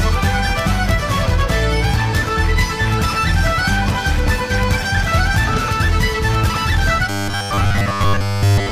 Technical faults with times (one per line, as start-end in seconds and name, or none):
1.21-1.27 damaged data in a compressed stream
3.90-3.94 damaged data in a compressed stream
7.10-8.72 robotic sound from repeated short buffers